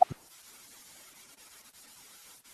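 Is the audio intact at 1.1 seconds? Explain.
No. Throughout the clip, including 1.1 s, the audio was read two samples at a time (double speed): pairs of samples were taken as single frames. The speech therefore runs 2 times too fast and 12 semitones higher.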